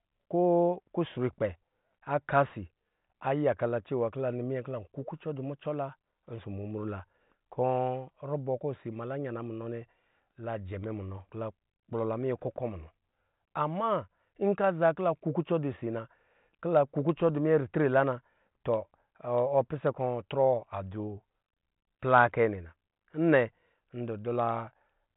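No faults are audible; the speech sits on a 40 kbit/s G.726 ADPCM path with nothing above 3.8 kHz, and any coding noise at that rate is faint at most.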